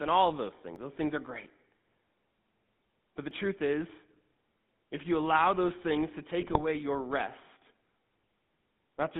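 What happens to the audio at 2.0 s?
At 2.0 s the speech has a buzzy, gravelly roughness and a boxed-in, telephone-like narrowness, with nothing above about 3.6 kHz and little below 150 Hz. This is the GSM full-rate codec, heard for the whole clip rather than only at this moment. The codec models the vocal tract and excites it with a sparse train of regularly spaced pulses, so the voice's natural excitation is replaced by that coarse pulse pattern, which fits the 13 kbps full-rate scheme.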